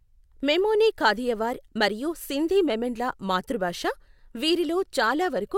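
Speech audio was handled in 2.5-second chunks that overlap, with each chunk starting about 6.5 ms before the previous one ended, a fault known as overlapping chunks. That sliver plays twice at each join, giving a brief click or stutter at 1.68 s, after "మెమోని కాథియవార్", and again at 4.19 s, after "మరియు సింధీ మెమన్ల మాతృభాష".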